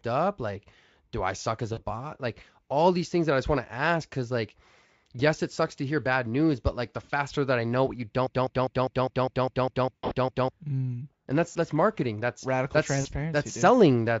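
Speech that keeps catching on brief buzzy, smeared gaps, where the sound stretches into a fading tone or noise for a moment and stays rough just after. This happens at 1.73, 4.85 (between "to ask cuz like" and "yes it sucks to"), 7.03, 9.96 to 10.13 (after "I know what you"), 11.51 (after "and that's") and 13.01 s. This is VoIP packet loss concealed by the speech codec. Packets went missing, about 40 ms at most points, 60 ms at 7.03 s, and 140 ms scattered over 160 ms around 10 s. The decoder filled each hole by extending its last pitch and filter settings while lowering the level, so the voice degrades into a tone or noise before recovering. From 8.27 to 10.50 s a fragment of about 0.2 s repeats back to back, eleven times, and the speech that belonged in that span never arrives. This broken-record loop most likely comes from the stream stalling and resending the last chunk it held. The underlying Speex coding itself adds little or no audible damage.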